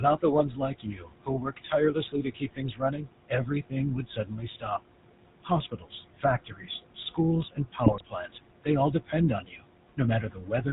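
Noise suppressor artifacts run through the whole of this speech recording. The background room noise, which sits about 13 dB below the speech, is pushed down by about 21 dB in the gaps and rises again under each phrase. This happens because the suppressor decides frame by frame which bands hold steady noise. The GSM full-rate codec is also present from start to finish, and its damage is plainly audible. The band stops at 4 kHz, and the voice has the buzzy, gravelly roughness of a vocal-tract model driven by a regular pulse train that keeps only a sparse share of the excitation, which fits the 13 kbps full-rate coder. Speech cut by the noise suppressor occurs from 0.0 to 4.8 s, 5.43 to 7.19 s, 7.51 to 8.32 s, 8.64 to 9.64 s and 9.97 to 10.66 s. The suppressor mistook quiet parts of the speech for noise and turned them down with the background, by up to about 19 dB in the first stretch. Roughly two seconds are affected there, and a few tenths of a second in each later stretch, so soft consonants and word endings sound swallowed or faint. 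GSM bit errors strike between 7.84 and 8.03 s. Flipped bits, at a rate of about 1.3 percent, reached the decoder and corrupted its filter, pitch and gain values across a burst of about a fifth of a second, which fits around nine 20 ms frames. Within that burst the voice breaks into squawks, pops and gargling as the spectrum bends and the level jumps.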